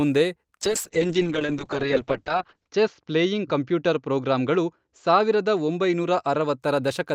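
From 0.62 s to 6.65 s the speech suffers a call bitrate drop. The encoder's budget falls from 32 to 7 kbps, bottoming out for 2.07 s, so it sounds coarse, watery and muffled. On a spectrogram, the energy ceiling drops from 20 kHz to 8 kHz.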